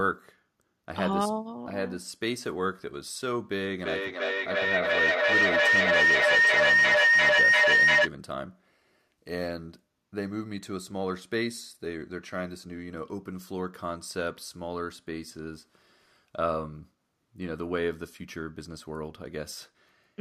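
Speech in which a shrill tone near 2 kHz swells from 3.81 to 8.12 s, pulsing about every third of a second and peaking about 10 dB above the speech. This is feedback howl: a second device in the room recirculates the audio, gaining level on each pass.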